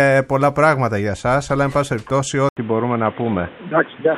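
At 2.49 s the sound drops out for 80 ms, then returns narrower and boxier, with nothing above 3.8 kHz, a somewhat different level and a new noise floor well below the signal. This points to the input likely having switched to a poorer device, which holds to the end.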